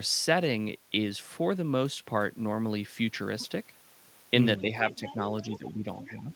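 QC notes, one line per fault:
4.61–4.66 s and 5.55–6.32 s, speech suppressed in double talk: the speech dips briefly by about 5 dB, then for roughly half a second by about 10 dB. This is likely an echo canceller ducking while both sides spoke. The waveform envelope sags.
4.90–5.14 s, 5.46–5.72 s and 6.01–6.09 s, other side's voice leaking through: a faint second voice sits about 15 to 20 dB under the speech, likely loudspeaker echo the canceller missed. It shows as harmonic traces beneath the main spectrogram energy.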